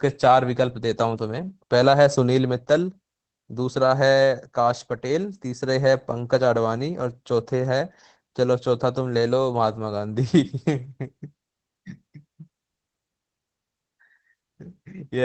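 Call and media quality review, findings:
Speech muffled, hoarse, faintly robotic throughout; no content above about 8 kHz. Opus voice compression, SILK linear-prediction mode, wideband. Coarse excitation coding at a low bitrate, consistent with roughly 12 kbps.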